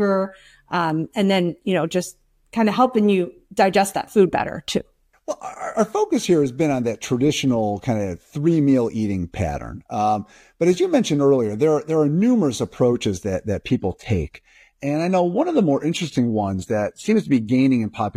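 At 13.67 s, right after "numerous approaches that that", the adaptive stream drops to a lower bitrate and stays there until the clip ends at 18.16 s. The speech switches abruptly to a thinner treble with nothing above 14.9 kHz, which points to a step from roughly 96 kbit/s AAC down to a 20 kbit/s HE-AAC rendition.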